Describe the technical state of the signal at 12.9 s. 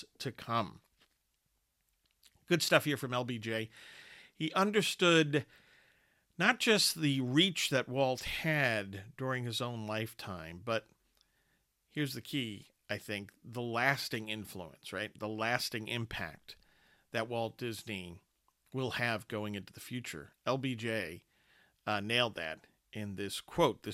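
At 12.9 s the speech signal is intact, with no audible technical fault at that moment.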